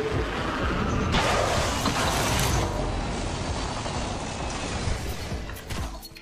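At 2.61 s the radio performs digital radio blending to analogue, cross-fading over 189 ms to the FM broadcast until 5.11 s. Hiss sits roughly 25 dB under the sound, and the level drops about 3 dB. The smooth fade plus hiss, rather than a gap or warble, separates it from a digital dropout.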